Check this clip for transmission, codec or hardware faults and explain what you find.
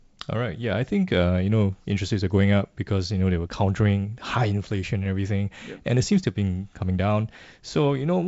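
No faults detected.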